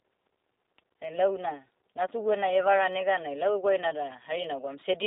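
From the start, the speech carries G.729 codec damage. The sound is rebuilt from a vocal tract filter, a pitch predictor and sparse pulses, which fits an 8 kbit/s coder. The band runs 300 Hz to 3.7 kHz. Voices sound rough and synthetic.

From 0.29 s to 4.82 s, faint regular ticks come about every 0.4 s, around fifteen in all. These are clock slip clicks. Two unsynchronised clocks likely drift by around 70 ppm. Each tick marks a single sample being dropped or repeated.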